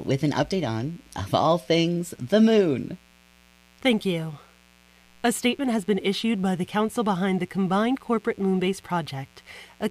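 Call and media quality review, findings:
Steady raspy buzz under the speech, whole clip, sitting roughly 35 dB below it. Mains buzz at 60 Hz: switching spikes from a dimmer, rectifier or unshielded run, twice per cycle, spraying harmonics up into the kilohertz range.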